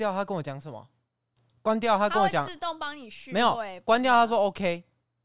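No technical faults can be heard in this clip, so there is nothing to describe in time order.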